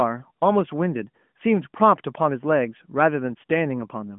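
No technical faults can be heard in this speech. The sound passes through an AMR narrowband mobile codec path, confined to roughly 150 Hz to 3.4 kHz with nothing above 3.5 kHz and only light coding texture, which fits the 12.2 kbps mode.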